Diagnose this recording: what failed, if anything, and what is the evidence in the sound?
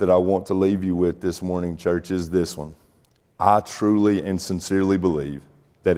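Nothing failed; the speech recording carries no audible evidence of a fault at any stage.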